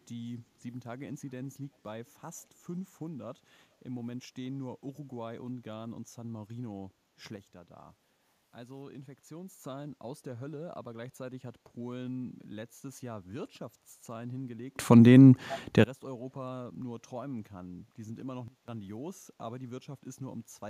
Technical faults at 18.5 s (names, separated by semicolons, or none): sudden gain jump